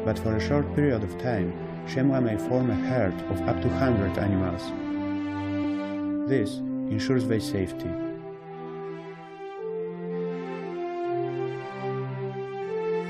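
Damaged data in a compressed stream produces four brief blips in the audio, at 0.66, 5.63, 7.84 and 11.53 s. Corrupted bytes make the decoder misread those frames and lose sync, emitting a short garbled burst until it finds the next valid frame header.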